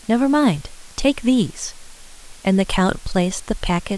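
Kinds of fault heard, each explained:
Low bit depth with dither: The speech has been stored with very few amplitude steps, and random dither was added before rounding, so the quantisation error comes out as steady broadband noise. Here a constant, even hiss sits under the speech for the whole clip, only about 25 dB below it, which fits an 8-bit signal. It does not rise and fall with the speech level, and it adds no gritty or harmonic distortion.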